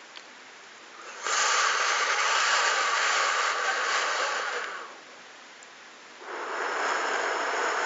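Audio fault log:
No fault to log.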